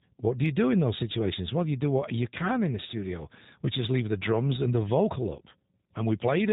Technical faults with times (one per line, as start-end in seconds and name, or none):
0.00-6.53 G.729 codec
0.46-6.15 clock slip clicks